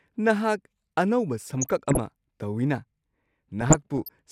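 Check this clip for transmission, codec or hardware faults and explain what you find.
DAB burbling twice, from 1.54 to 1.99 s and from 3.61 to 4.09 s: short blips of noise over the speech. Weak reception, around half a percent bit errors, lets corrupted MP2 samples and scale factors through, so single sub-bands can jump in level for up to a frame within a couple of dozen affected frames.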